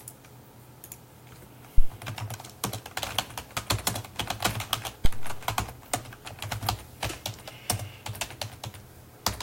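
At 1.78 s and again at 5.05 s there's a phantom power thump, a supply switching on the live input and pushing a deep low thud through the coupling capacitors. The first peaks around -5 dBFS and dies in 20 ms; the second, around -9 dBFS, takes 106 ms.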